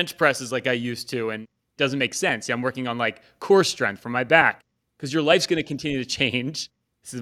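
No technical faults can be heard anywhere in the speech recording.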